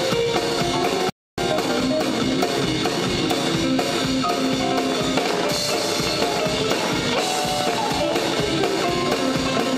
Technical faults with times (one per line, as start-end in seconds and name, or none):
1.10-1.38 playback stall
1.38-3.22 time-compressed catch-up
4.79-8.13 train of clicks